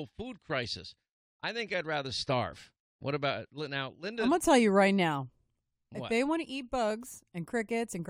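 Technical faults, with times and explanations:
No technical faults can be heard anywhere in the speech recording, and the signal holds steady from the first moment to the last.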